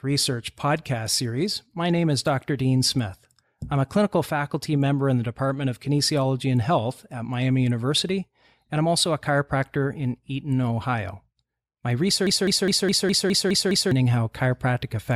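Speech clip with a broken-record loop from 12.27 to 13.91 s. A 0.21 s fragment repeats eight times back to back. A stalled player or stream is likely, and the audio meant for that span is lost.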